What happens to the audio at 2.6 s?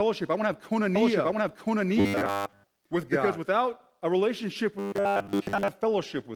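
At 2.6 s two faults overlap. The first is a doubled audio track, running from 0.95 s to 3.37 s and ending just before "without a relationship". A second full-band copy of the same sound plays about a second behind the original at roughly equal loudness. It is dry, with no decay or room colour, and it cuts in and out abruptly at the span's edges. This is likely the signal being captured a second time through a slower path and mixed back in.

The second is robotic sound from repeated short buffers, from 2.00 s to 2.64 s, so 2.6 s falls near its end. Fresh audio is likely arriving too seldom, and the gaps are filled by replaying the most recent short slice while most of the real sound is skipped. The repetition imposes a rigid 100 Hz buzz, which points to a loop of about 10 ms. The sound becomes a flat, metallic drone that only loosely tracks the speech.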